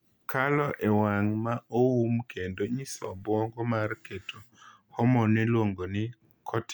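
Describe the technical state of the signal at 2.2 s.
At 2.2 s the speech signal is intact, with no dropout, distortion or other fault audible at that moment.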